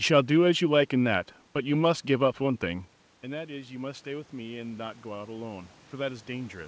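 Automatic gain rising from 2.61 s to the end: the input fell about 15 dB, so the gain control gradually raised its gain, swelling speech and room noise together.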